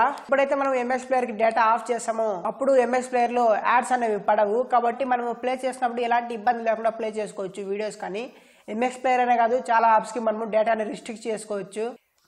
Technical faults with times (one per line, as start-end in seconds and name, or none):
4.93-6.51 drift correction step
9.79-10.39 drift correction step